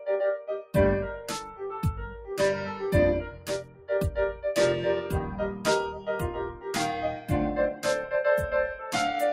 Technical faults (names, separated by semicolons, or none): noise suppressor applied to music or sounds; sound cut by the noise suppressor